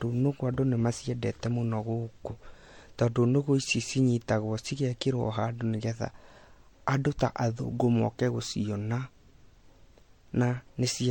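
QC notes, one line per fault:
Throughout, generation loss: the speech sounds swirly, smeared and hollow, and attacks blur. Nothing is heard above 16.6 kHz. The likely cause is about four rounds of MP3 encoding, fitting 64 kbit/s. Each pass requantises on a shifted frame grid, stacking noise and spectral holes.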